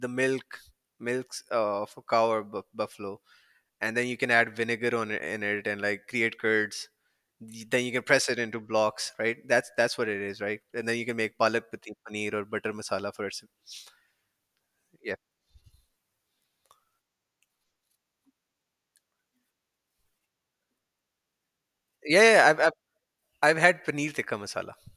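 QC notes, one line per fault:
No faults found in this clip.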